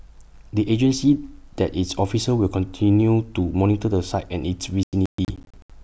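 Near the end, from 4.83 to 5.70 s, the speech breaks into processor overload crackle. The processor keeps missing its deadlines, and each missed buffer of roughly 30 ms drops to silence with hard edges. About fifteen of those dropouts pile up into a gritty, tearing crackle over the voice.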